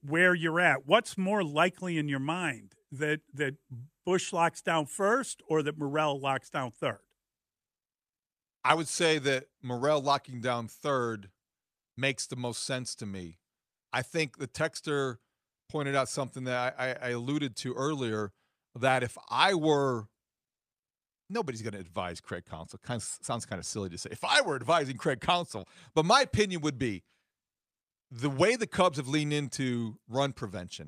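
Speech, with no audible faults.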